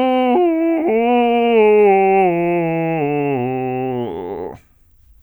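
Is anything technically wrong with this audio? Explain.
No, the music signal shows no technical faults that a listener can detect.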